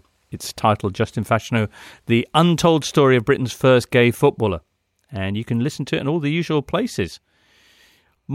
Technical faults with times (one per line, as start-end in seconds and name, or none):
none